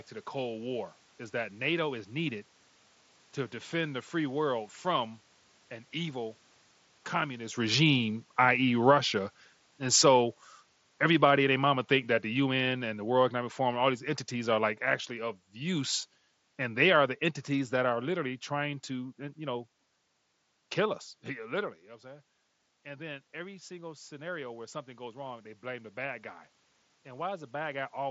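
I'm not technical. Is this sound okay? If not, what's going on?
No, not quite. From about 7.6 to 18.2 seconds, just after the speaker moves, automatic gain falling kicks in: the level control slowly turns everything down, voice and background together, starting just before "trying to you know".

Then, after the speaker drifts back around 21.5 seconds, automatic gain rising slowly pushes the volume up again from 22.0 to 27.9 seconds, so the background room noise swells along with the voice.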